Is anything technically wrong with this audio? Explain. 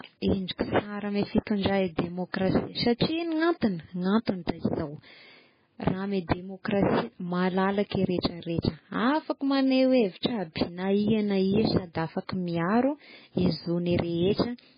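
Yes. Heavy MP3 compression runs throughout the speech, likely from a very low bitrate around 16 kbps. With too few bits, the encoder cuts everything above 5 kHz and drops weak frequency lines that flicker frame to frame, so the speech sounds dull, watery and swirly. A spectrogram shows a flat ceiling at 5 kHz with patchy holes below.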